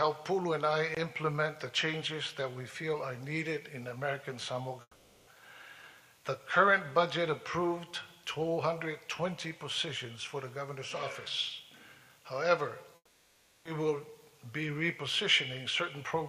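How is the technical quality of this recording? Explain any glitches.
Two gaps spoil it. From 4.81 to 5.29 s and again from 12.95 to 13.67 s, the sound smears into a fading buzzy tail for about 460 ms and 700 ms respectively, drops to silence for roughly 40 ms, then picks up further along with that stretch simply gone. That's likely a long network dropout: packets stopped arriving, the receiver stretched the last audio it had to cover the hole, and the lost material was never recovered.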